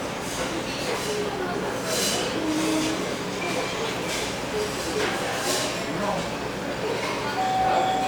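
No audible technical faults.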